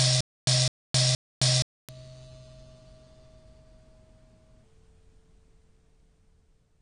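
From 0.00 to 1.89 s the music opens already in a stutter with silent gaps. A 0.21 s fragment repeats three times, each followed by 0.27 s of digital silence, so it returns every 0.47 s. A stalling player likely replayed its last buffer each retry. The music meant for those gaps is lost.

The whole clip carries AAC compression damage, plainly audible and likely from AAC-LC at a low rate, which fits about 32 kbps. Nothing sounds above 9.6 kHz. The top sounds dull and smeared, and sustained sounds warble with a fizzy edge.

From 4.64 s to the end at 6.82 s comes a section at the wrong speed. It plays at 0.697 times normal speed, likely from a wrong clock. The music drops about seven semitones and drags, deep and slow.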